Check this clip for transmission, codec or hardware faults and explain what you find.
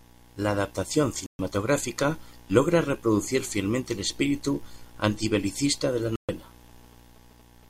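Two digital broadcast dropouts break the speech, at 1.26 to 1.40 s and at 6.16 to 6.29 s. Each time the receiver mutes for about 0.13 s, which fits roughly four corrupted frames, then resumes later in the programme. The sound drops to silence, showing as a flat waveform gap and a blank vertical band across every frequency on a spectrogram.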